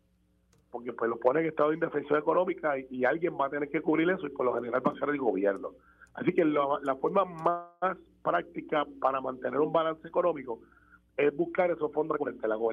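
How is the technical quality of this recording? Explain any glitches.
There are two glitches, both late in the recording and both of the kind you get when network timing wobbles on a call.

At 7.49 s there's a call audio freeze lasting until about 7.95 s. The sound doesn't cut out. Instead the last bit gets stretched into a fading buzz or hiss for around 324 ms before things pick up again right where they left off. That's most likely packets stalling in transit and the jitter buffer running dry, so the receiver improvised filler. Nothing actually gets lost; the audio just ends up shifted later by that same 324 ms.

Then from 12.10 s to 12.70 s you get a jitter buffer speed-up. The audio rushes along at about 135% speed while the pitch stays put, so it sounds hurried rather than chipmunky. What's happening is the buffer has built up more backlog than it wants, so the receiver snips out lots of tiny pitch-period-sized slices in quick succession, trimming about a fifth of a second in total to claw back the delay.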